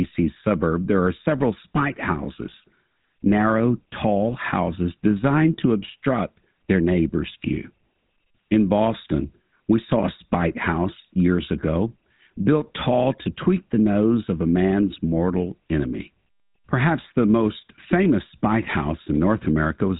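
From the very start and all the way through, the speech carries the GSM full-rate codec's signature damage, and it's plainly audible. The codec rebuilds the voice from a vocal-tract model excited by evenly spaced pulses, holding onto only every third excitation sample, so you hear that buzzy, gravelly grain on everything. Nothing gets through above 4 kHz, which dulls the top end. The whole thing fits a 13 kbps phone-grade stream.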